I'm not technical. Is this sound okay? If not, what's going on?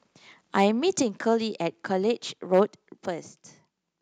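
No. At 0.58 to 0.66 s and again at 2.53 to 2.61 s, the loudest moments sound harsh and crackly, worse the second time. This is likely microphone overload: the input was set too high, so the tops of those peaks were chopped off.

Right after each crackle, at 1.02 s and 3.06 s, the speech and background suddenly get quieter in one step. That is likely the microphone volume stepped down, with the call software turning the input down after hearing the distortion.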